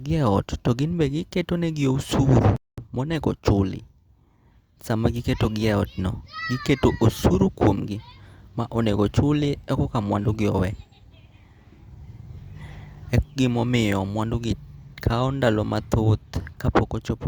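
At about 2.56 s the speech cuts out cold, and it stays silent until 2.78 s, a gap of roughly 0.21 s, before picking up again. That's a playback stall, most likely the player running dry of data or its thread getting blocked for a moment.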